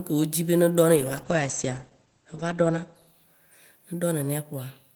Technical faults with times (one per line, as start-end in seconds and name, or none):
0.99-4.41 call bitrate drop